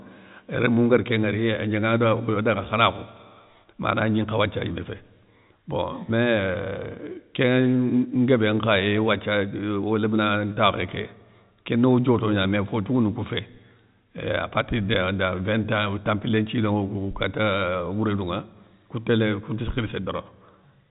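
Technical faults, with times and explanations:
No technical faults are present in this speech recording.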